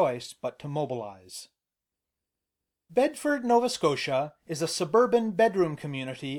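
No technical faults can be heard in this recording.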